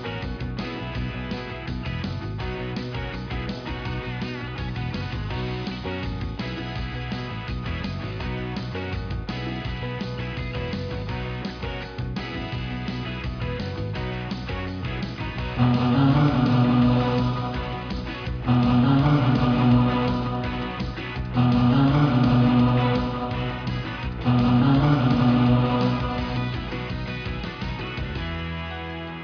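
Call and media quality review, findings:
No call or media quality faults found in this audio.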